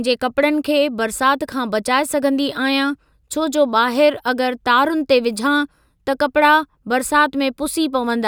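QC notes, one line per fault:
No faults heard in this speech recording.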